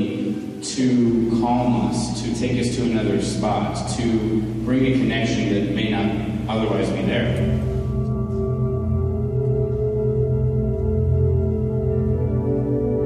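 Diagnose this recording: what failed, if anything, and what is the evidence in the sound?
Mains hum enters in the analogue wiring stage, most likely through a ground loop or a nearby transformer coupling the 60 Hz power line into the signal path. From 1.05 s to the end of the clip, a steady low 60 Hz tone with a few low harmonics sits under the sound at a fairly high level, roughly 10 dB below the signal. A spectrogram would show a continuous horizontal line at 60 Hz, with fainter lines at multiples above it. The waveform would carry a constant low-frequency ripple even in quieter passages.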